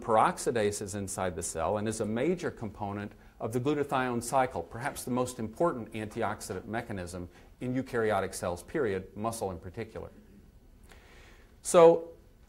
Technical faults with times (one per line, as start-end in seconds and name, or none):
none